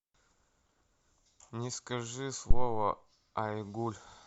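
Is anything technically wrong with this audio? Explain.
Yes. At 2.51 to 2.83 s there is a phantom power thump: a supply switched on a live input sends a voltage step through the coupling capacitors. It is heard as a deep thump peaking around -9 dBFS that dies away over about 74 ms.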